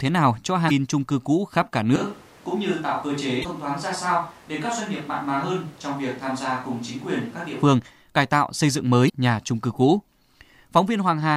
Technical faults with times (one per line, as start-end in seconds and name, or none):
0.67-0.71 damaged data in a compressed stream
1.96-7.62 switch to a distant microphone
3.41-3.46 damaged data in a compressed stream
9.05-9.10 damaged data in a compressed stream